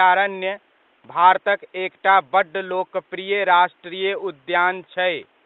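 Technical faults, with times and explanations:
No technical faults heard.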